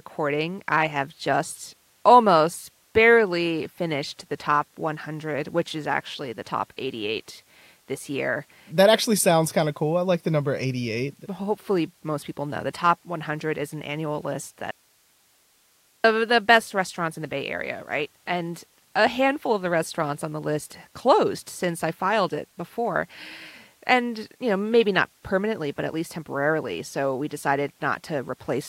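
At 14.71 s the speech cuts out abruptly and stays gone until 16.04 s, a gap of about 1.33 s. That's an audio dropout to a faint residue. It doesn't sound like a pause or a fade, because the signal just stops mid-flow. What's left in the hole is hiss at roughly 40 dB below the speech. The likely cause is the wanted signal being lost upstream while the path after the break stayed live and kept passing its own noise.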